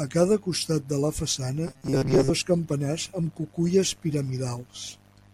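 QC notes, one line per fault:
1.68–2.31 s, robotic sound from repeated short buffers: between "costat de la façana" and "dos campanars amb cuculles" the speech becomes a rigid metallic buzz fixed near 133 Hz that only loosely follows the words, with most of the stretch made of repeats. The likely cause is audio arriving too seldom, so a chunk of about 7.5 ms is replayed in place of skipped material. Unlike a longer stutter, no whole syllables repeat.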